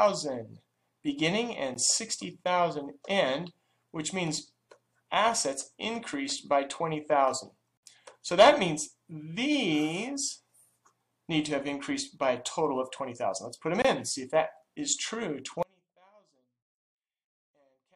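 Gaps between stream segments occur three times, about 6 s apart, which points to 6-second segments whose time stamps don't quite meet. The player fills each shortfall with silence, so the sound is cut by a hard-edged hole: a brief one at 1.74 s (about 16 ms), a longer one from 7.77 to 7.83 s (about 57 ms), and one from 13.82 to 13.85 s (about 25 ms). Nothing is skipped; the sound simply stops and resumes abruptly at each hole.

From 15.63 s to the end, the wanted signal is lost in an audio dropout to a faint residue. This is likely a break upstream while the rest of the path stayed live. The sound cuts out abruptly rather than fading, and what remains is a faint leak of it far below its normal level, roughly 35 dB down. That residue continues to the end of the clip with no recovery.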